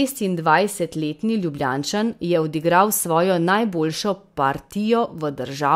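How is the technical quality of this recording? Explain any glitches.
No technical faults or glitches can be heard anywhere in the recording.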